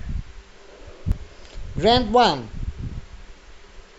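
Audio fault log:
1.12 s, overlap between stream segments: a tiny skip in the speech. Two segment time stamps overlapped, so the player cut about 18 ms of audio that was never actually doubled. The waveform jumps across the missing piece.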